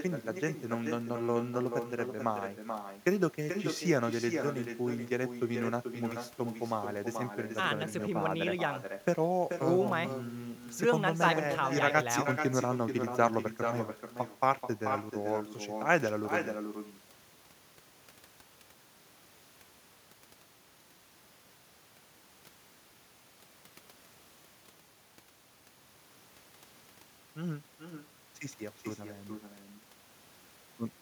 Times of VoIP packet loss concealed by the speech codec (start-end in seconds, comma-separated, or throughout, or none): none